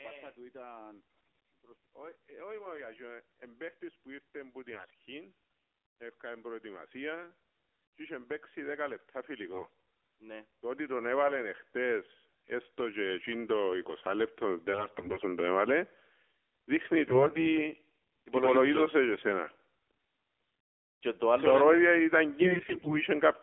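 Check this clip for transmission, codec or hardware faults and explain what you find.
Two faults are present in this speech clip: narrowband mobile coding throughout, and six short bursts of corrupted frames.

AMR narrowband mobile codec, throughout: the speech has passed through AMR-NB. It samples at 8 kHz and rebuilds the voice from a vocal-tract model excited by a handful of pulses per 5 ms subframe. The audible band runs from roughly 300 Hz to 3.4 kHz, and the low-bass trim from the call's microphone high-pass sits inside that. The plainly buzzy, synthetic texture fits a low mode around 7.4 kbps.

AMR bit errors, at 1.10–1.42 s, 4.72–4.95 s, 9.52–9.74 s, 14.72–15.26 s, 17.04–17.46 s and 22.42–22.98 s: these are bursts of flipped bits in the weakly protected parts of the frames. The frames still decoded, so the errors were not concealed. Misplaced excitation pulses and skewed gain and spectral values make the voice turn hoarse, scratchy and gargly, while its pitch and loudness roughly hold. 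In the worst bursts the error rate reaches near one bit in seven.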